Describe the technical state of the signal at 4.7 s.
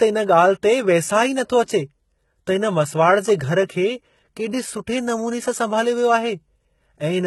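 At 4.7 s, like everywhere in this speech, you get gritty, lispy treble, likely HE-AAC compression at roughly 16 kbps rebuilding highs by band replication, with nothing above 11.8 kHz.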